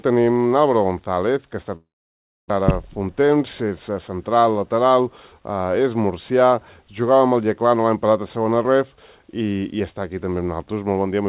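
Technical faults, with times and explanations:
1.76–2.52 s, long network dropout: Incoming audio most likely stopped arriving for a long stretch, leaving the receiver with nothing to play. It continued the last sound as a fading buzz, which gives way to about 640 ms of silence. When the sound resumes, about 600 ms of material is simply gone, and playback now runs roughly a tenth of a second later than before, heard through the narrow G.711 band with nothing above 4 kHz.
2.61–4.36 s, jitter buffer speed-up: After the gap, the jitter buffer was holding more audio than its target, so the receiver trimmed the backlog by repeatedly cutting out short pieces one or a few pitch periods long, roughly a tenth of a second in total. Pitch stays the same, but for these 1.7 seconds the sound plays about 6% fast, giving it a slightly hurried, pushed quality until the buffer is back at its normal depth.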